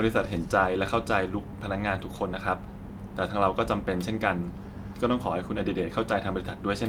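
No technical faults can be heard anywhere in the recording. The speech runs without any break, glitch or disturbance to point to.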